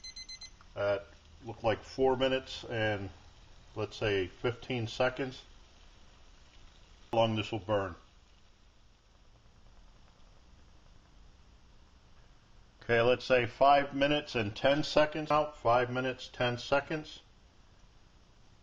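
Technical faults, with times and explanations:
7.13 s and 15.30 s, damaged data in a compressed stream. At each moment, part of the encoded file or stream was corrupt. Bytes there were lost, zeroed, overwritten or mixed with other data. The decoder could not read those frames correctly. It lost its place in the stream and searched for the next valid frame header before playing again. That brief breakdown is heard as a short glitch at each time, such as a chirp, squawk, click or gap.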